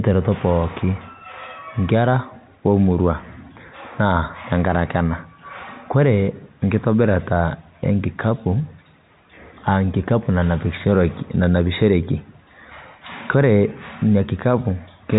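Nothing here sounds off: the speech simply comes through the ordinary telephone channel, G.711 telephone coding with its narrow band that stops around 3.8 kHz, and no fault turns up anywhere along the way.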